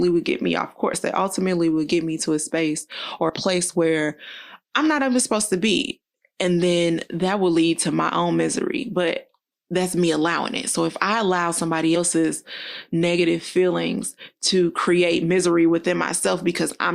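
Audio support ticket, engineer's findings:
Compressed frames skipped at 0.93–0.96 s, 3.29 s and 11.95–11.98 s: audio jumps ahead about 40 ms each time, consistent with two dropped 20 ms frames. Decoder side: frames missing or rejected as damaged.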